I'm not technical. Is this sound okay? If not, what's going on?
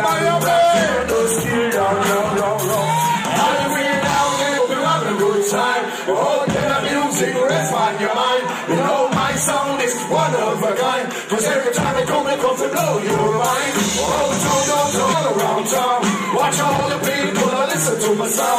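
No, there are two brief glitches, at 4.58 to 4.60 s and at 15.12 to 15.14 s, each lasting about 20 milliseconds. Both are damaged data in a compressed stream. The audio was stored in a compressed format, and a small piece of that stored data was spoiled. When playback reached those spots, the decoder could not read the data properly and had to find its place again, causing a brief chirp, click or short gap in the sound.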